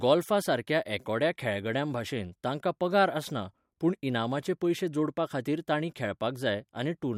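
No technical faults are audible.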